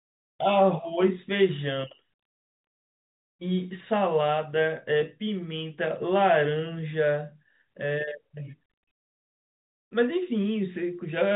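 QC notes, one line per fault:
No faults heard; telephone-band speech, nothing above 3.8 kHz.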